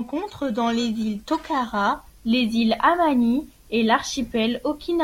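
A speech recording whose opening stretch, from 0 to 1.94 s, carries a rough, metallic edge that disappears in the pauses. This is periodic clock jitter: interference shaking the converter clock at around 3 kHz adds sidebands at that spacing around every component, most strongly the high frequencies.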